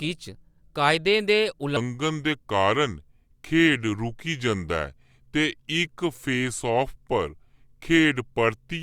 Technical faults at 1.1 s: none

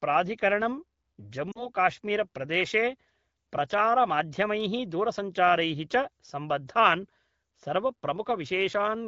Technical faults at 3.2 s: none

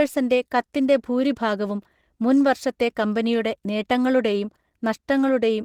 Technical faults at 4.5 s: Opus compression

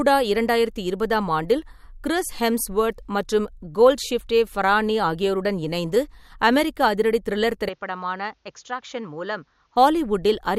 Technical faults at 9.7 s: input switched to a poorer device

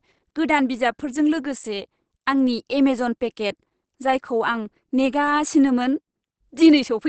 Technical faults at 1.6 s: Opus compression

